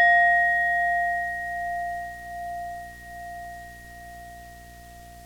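From start to finish, a video or display buzz sits under the sound: a screen or video cable has coupled its field-rate signal into the audio path, adding a steady 60 Hz buzz with a gritty hash above it, roughly 25 dB below the wanted signal. On a spectrogram this appears as unbroken horizontal lines at 60 Hz and its harmonics, plus a smear higher up. The waveform carries a small repeating ripple beneath everything.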